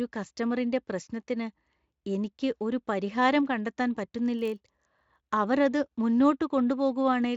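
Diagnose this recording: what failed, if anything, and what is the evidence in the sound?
A buffer-stage fault, a block size mismatch (padded), runs from 4.37 s to 5.25 s. Through that stretch the speech carries a steady buzz at about 46.9 Hz. That rate fits the reading stage taking 1024-sample blocks while the writing stage supplies slightly fewer, with the shortfall in each block filled with zeros. The resulting tiny gaps repeat at the block rate. The timbre stays and the slowdown is negligible, a factor of 0.999. The Speex coding itself shows little or no damage.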